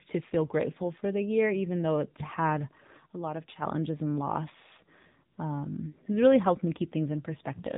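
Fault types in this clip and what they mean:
AMR narrowband mobile codec: The whole clip has that phone-call quality. Nothing above 4 kHz survives, and the speech sounds plainly buzzy and synthetic, which fits AMR-NB running at a low rate of around 7.4 kbps, where each 20 ms frame gets very few bits.
Sudden gain jump: Right after "even though it's had", at 3.07 s, the level drops abruptly by about 6 dB, and background and speech fall together. It snaps back at 3.62 s, just before "and loss". The likely cause is a gain change applied without any ramp.
AMR comfort noise: Just after "and loss", from 5.32 to 5.38 s, the real background gives way for about 60 ms to a smooth, steady synthetic hiss. The codec treated that moment as silence and filled it with generated noise instead of sending speech frames.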